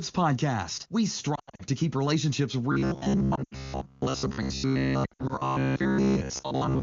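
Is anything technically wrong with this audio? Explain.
Yes, there are two faults.

Lost AMR speech frames occur at 1.35 to 1.62 s, 3.35 to 3.55 s and 5.05 to 5.33 s. Radio errors corrupted frames, so the decoder stretched the last good pitch and vocal tract settings while fading them. Each patch sounds smeared and dipping, with runs of up to 80 ms.

Robotic sound from repeated short buffers runs from 2.72 s to the end. Most of the audio there is repeats of short chunks, likely because new audio arrived too slowly. The speech becomes a rigid metallic buzz at 66.8 Hz, which fits a buffer about 15 ms long.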